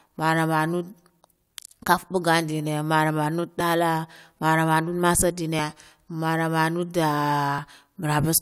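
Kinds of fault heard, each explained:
Overlap between stream segments: skips at 3.60, 5.59 and 7.58 s, spaced about 2 s apart, which fits 2-second stream segments. Where each segment's time stamps ran into the next, the player trimmed the shared stretch as if it were duplicated, but that sound existed only once. About 6 ms of the speech disappears at each joint, so the waveform jumps abruptly and a brief click or tiny skip recurs at each boundary.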